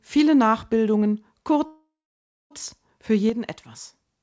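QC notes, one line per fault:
1.66–2.53 s, call audio freeze. The sound stops moving forward for about 0.85 s. The last sound is carried on as a fading buzz, which then sinks into roughly 0.6 s of silence. The audio then resumes exactly where it stopped, so nothing is lost, but everything after arrives about 0.85 s late. This is likely packets being held up in transit until the jitter buffer ran dry on this G.722 call path.
3.30 s to the end, one channel drops out. The level falls abruptly by about 6 dB and stays down for the remaining 0.93 s. There is no fade. The step is sudden and holds steady. The likely cause is one stereo channel going missing before the mono sum. Only the surviving channel then contributes, which halves the amplitude of the shared sound. That halving is the 6 dB drop heard here.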